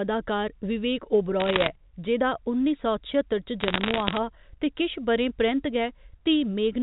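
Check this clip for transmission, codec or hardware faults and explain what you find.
There are bit errors on a digital phone line in two bursts, from 1.4 to 1.67 s and from 3.6 to 4.18 s. At around one percent of bits flipped, each hit knocks a single sample off, so sign or high-bit hits crack out as sharp ticks, giving a patchy crackle over otherwise intact speech. Underneath, the G.711 telephone band tops out at 4 kHz, as expected.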